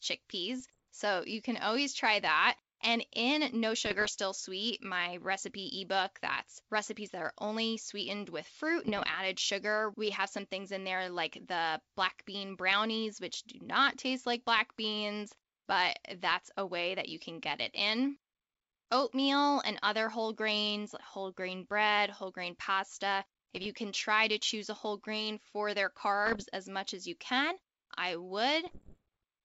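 Bit errors on an ADPCM link flip around 0.7 to 1% of bits in the G.722 stream at 0.60 to 0.84, 3.85 to 4.10, 8.86 to 9.17, 23.55 to 23.67, 26.26 to 26.43 and 28.67 to 29.03 s. Each error throws the decoder's step size and predictor off track, so the speech breaks into pops and rough bursts with brief jumps in level.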